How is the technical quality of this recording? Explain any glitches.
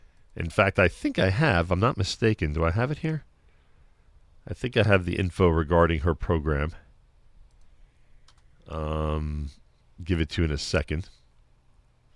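No technical glitches turn up anywhere in the recording, and the signal stays continuous and intact throughout.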